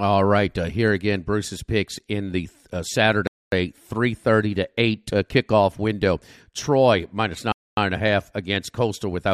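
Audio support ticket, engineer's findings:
Gap between chunks, 3.27–3.52 s after "picks in the uh" and 7.52–7.77 s before "and a half against". 250 ms silences, 4 s apart. Speech held back, not lost. Each join is delayed, which fits 4 s chunking with padding or late chunk starts in the player.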